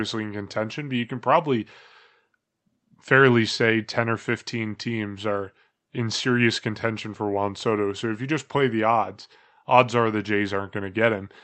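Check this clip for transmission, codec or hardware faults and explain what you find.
No transmission, codec or hardware faults are audible; the speech shows only the normal character of an Opus call path, with the top end rolled off above roughly 8 kHz as that codec's bandwidth setting would produce.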